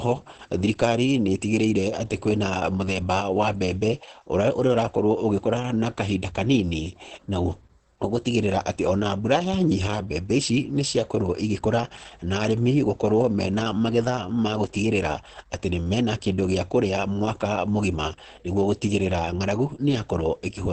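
A speech recording carrying heavy Opus voice compression from start to finish. The voice sounds muffled, hoarse and faintly robotic, which fits the SILK linear-prediction coder running in wideband at a low rate, around 10 kbps, with its excitation coded coarsely in 20 ms frames. On a spectrogram there is a hard ceiling near 8.4 kHz with nothing above it, and the harmonics below look blurred and grainy rather than cleanly striped.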